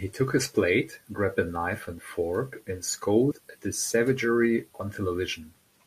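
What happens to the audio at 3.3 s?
At 3.30 s, compressed frames are skipped. Roughly 50 ms of audio vanishes, which fits about two 24 ms codec frames. The audio jumps ahead by that much at the join. The spectrogram shows harmonic tracks jumping abruptly at the join.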